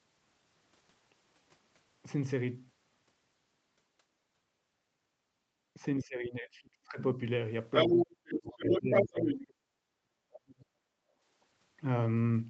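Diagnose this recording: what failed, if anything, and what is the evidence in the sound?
Speech suppressed in double talk, 6.01–6.99 s and 7.89–10.7 s: the speech drops roughly 25 dB, then up to 40 dB, likely because the call's echo canceller confused the overlapping voices.

Other side's voice leaking through at 7.73–8.05 s, 8.29–8.39 s and 8.59–9.46 s: an uncancelled second voice from the loudspeaker, mostly a few dB above the talker, briefly below, likely from residual echo.

Background gated by the echo canceller, 10.98–11.21 s: the room sound dips about 10 dB for roughly 200 ms as call processing clamps the microphone, then recovers.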